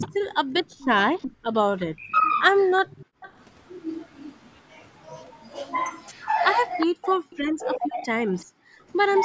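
Speech suppressed in double talk, 0.0 to 0.13 s: the voice dips by about 10 dB for roughly a tenth of a second, likely because an echo canceller could not separate overlapping talkers and turned both down.

Echo leak, 0.01 to 5.06 s: a faint copy of the voice trails 374 ms behind, about 20 dB below it, likely residual loudspeaker echo that the far side's canceller failed to remove.

Background gated by the echo canceller, 0.68 to 1.47 s: the room sound drops by about 23 dB in brief gaps totalling around 200 ms while the canceller clamps the microphone, then recovers.

Speech suppressed in double talk, 1.9 to 3.13 s: the voice cuts out in pieces, falling by about 40 dB for roughly 0.7 s in total, likely as both sides overlap and the canceller suppresses everything.

Echo leak, 6.52 to 8.45 s: the 374 ms delayed copy returns and is more prominent, only about 10 dB below the voice.

Speech suppressed in double talk, 6.85 to 8.66 s: the voice again drops out in pieces, by about 40 dB for around a second in total.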